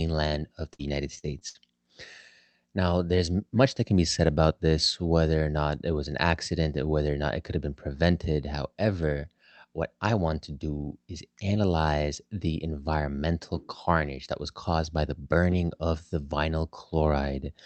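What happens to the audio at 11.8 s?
Nothing goes wrong at 11.8 s: the speech there carries on intact, with only the steady band-limited sound of the Opus call path, whose content stops at about 8 kHz.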